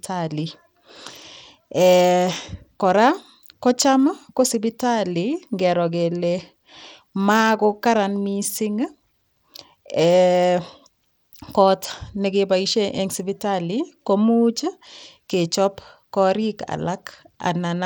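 Bluetooth SBC compression runs throughout the speech, and the plainly audible damage is likely from that codec at a low bit pool, consistent with roughly 96 kbps. Starved upper sub-bands leave the treble flickering and dropping out, while coarse quantisation adds gritty noise and aliasing.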